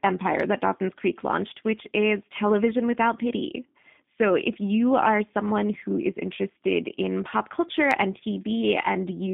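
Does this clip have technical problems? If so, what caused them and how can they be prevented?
Yes. The whole clip carries G.729 codec damage: the speech sounds slightly rough and synthetic, as if rebuilt rather than recorded, which fits an 8 kbit/s coder like G.729A modelling the vocal tract, pitch and a handful of pulses every 10 ms frame. On top of that the line band runs only from about 150 Hz to 3.6 kHz, so the top end is gone. To prevent it, carry the call on a wideband codec such as G.722 or Opus, or record locally instead of capturing the phone line.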